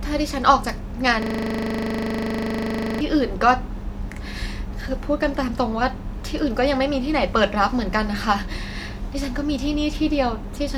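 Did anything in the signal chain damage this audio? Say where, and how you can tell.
Yes. At the driver or buffer stage there is a system hang loop from 1.22 to 3.01 s: one 40 ms slice repeats 45 times, producing a rough 25 Hz buzz in place of the speech. The host stalled while the hardware kept replaying its ring buffer.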